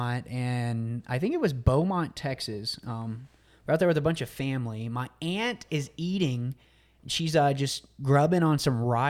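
No dropouts, clicks, distortion or other transmission or processing faults are audible anywhere in the speech.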